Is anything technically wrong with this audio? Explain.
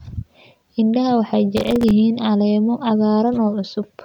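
Yes. Processor overload crackle from 1.57 to 1.91 s: repeated missed deadlines on tiny, few-millisecond buffers left silent gaps, heard as gritty crackle over the speech.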